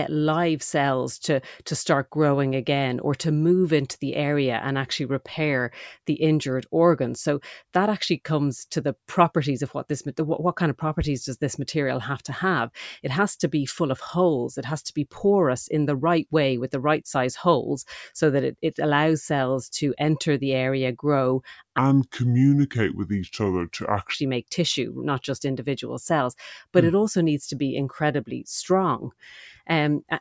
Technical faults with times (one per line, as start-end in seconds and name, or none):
21.78-24.14 wrong sample rate